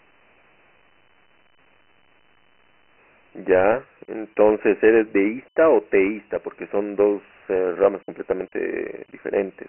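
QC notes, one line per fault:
Throughout: Dialogic VOX ADPCM. The speech is confined to a narrow telephone band with no content above 3.1 kHz and thin low end below about 300 Hz. A gritty, granular hiss rides along with the voice and tracks its level. Each sample is coded as a 4-bit step relative to a running prediction, so coarse quantisation noise follows the signal. The ceiling fits roughly 6,000 samples a second, or about 24 kbps.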